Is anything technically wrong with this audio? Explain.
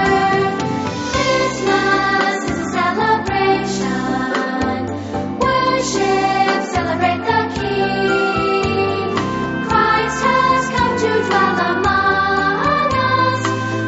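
No, nothing here is technically wrong.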